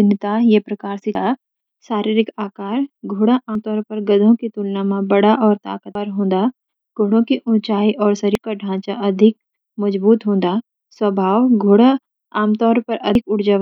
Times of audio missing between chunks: 1.15, 3.55, 5.95, 8.35, 13.15

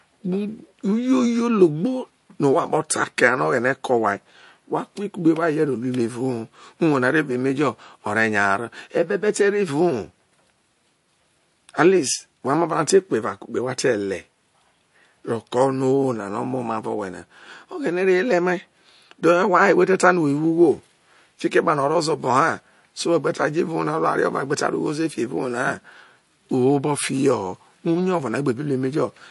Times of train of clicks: none

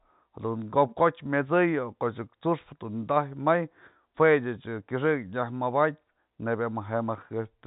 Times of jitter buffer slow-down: none

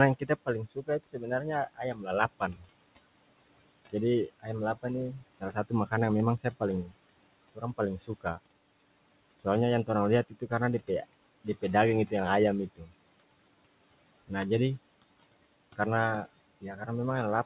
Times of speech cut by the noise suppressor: 0.19-2.67, 3.92-6.92, 7.55-8.39, 9.40-10.89, 11.44-12.12, 12.76-12.92, 16.61-16.88

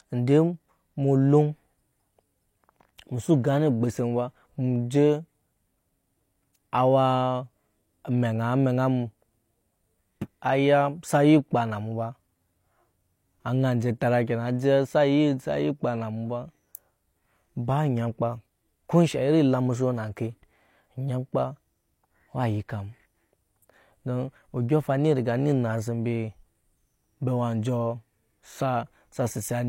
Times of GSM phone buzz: none

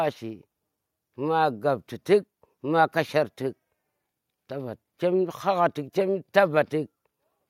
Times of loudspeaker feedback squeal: none

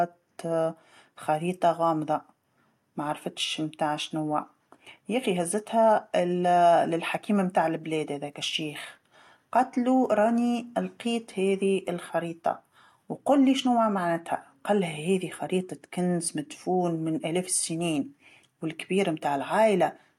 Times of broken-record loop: none

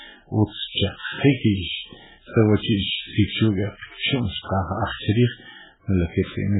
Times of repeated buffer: none

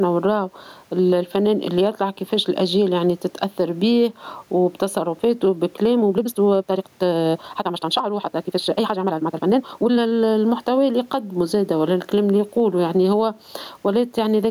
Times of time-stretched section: 5.97-10.15

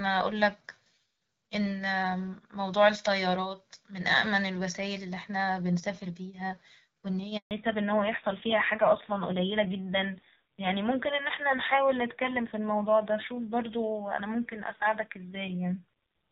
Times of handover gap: 7.37-7.51

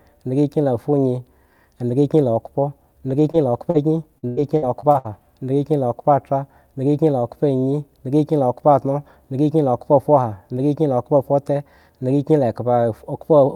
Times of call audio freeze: none

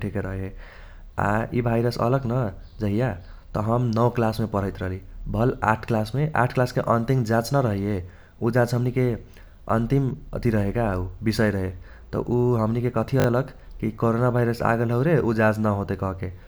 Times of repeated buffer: 13.20-13.26

